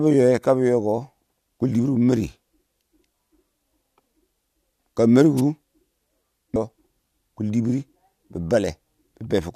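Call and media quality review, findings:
Wireless microphone noise hit, 5.37–5.41 s: brief swish of static over the speech, about 46 ms. Analogue FM radio link. Reflections cancel the carrier, and receiver noise rises through the fade and briefly masks the signal.

Stream segment skipped, 6.55 s: abrupt jump forward in the speech with a small blip. Segmented stream delivery. Likely one segment failed to load and the player continued from the next, splicing across the gap.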